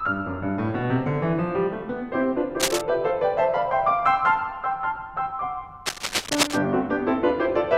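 A music clip with two bursts of cable scratch noise. The first runs from 2.60 to 2.81 s at roughly the level of the music; the second, longer one runs from 5.86 to 6.58 s, a little quieter. Each is a dense, uneven rustling that sits over the music and then stops. The likely cause is a worn cable, connector or control being moved, so that its contact resistance flickers. Unlike isolated clicks or steady crackle, this is a clustered scratch confined to those two moments.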